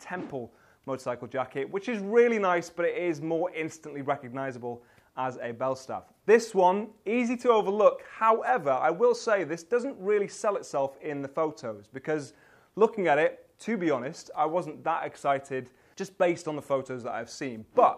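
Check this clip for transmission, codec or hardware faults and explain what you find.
No transmission, codec or hardware faults turn up in this clip.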